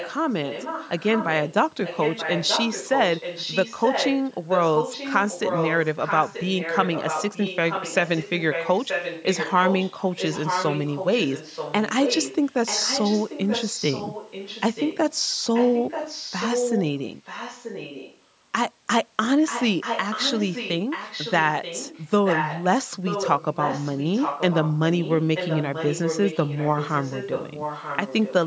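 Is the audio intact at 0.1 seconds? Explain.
No. From 0.0 to 0.15 s, a quieter delayed copy of the speech, roughly 10 dB down, trails it by 932 ms. This is likely an echo leak: a loudspeaker's sound got past the far side's echo canceller and was sent back.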